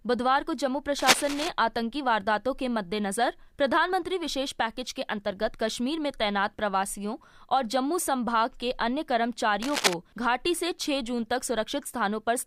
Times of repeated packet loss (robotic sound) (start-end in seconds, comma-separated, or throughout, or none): none